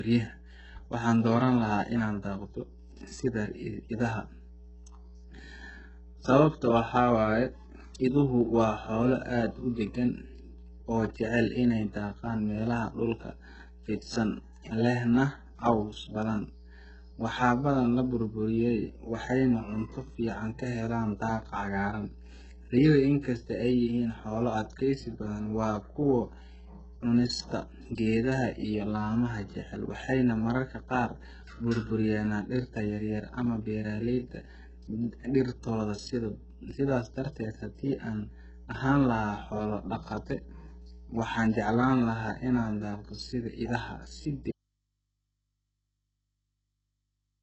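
A steady 60 Hz mains hum runs under the whole speech clip, sitting roughly 20 dB below the voice. That's the classic sign of the power line leaking into the signal, through a ground loop or a transformer close to the cabling.

The codec damage is heavy and present throughout. Nothing reaches above 8 kHz, and the top end sounds rebuilt rather than real, with gritty, metallic s sounds. That's likely HE-AAC compression, copying lower bands upward, and it fits a very low bitrate of around 8 kbps.

At 44.51 s the speech cuts out abruptly, which points to a likely audio dropout to a faint residue. It never returns before the end. The gap holds only the hum, roughly 50 dB down, so the path after the break stayed live.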